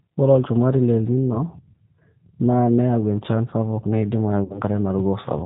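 Throughout the speech, the G.729 codec shapes the sound. At a rate that fits 8 kbit/s, each 10 ms frame is rebuilt from a vocal tract filter, a pitch predictor and a sparse set of pulses instead of the original waveform. The damage is plainly audible. Nothing above 4 kHz survives, so the top end is missing, and the voice has a rough, slightly synthetic grain on every syllable.

From 4.44 s to 4.61 s, VoIP packet loss concealed by the speech codec takes over. Around 60 ms of audio never arrived, which fits three 20 ms packets. The decoder extended its last pitch and filter settings and lowered the gain frame by frame, so the sound is stretched out and fades. Because each frame builds on the previous one, the speech stays weak and distorted after packets resume, until about 4.61 s.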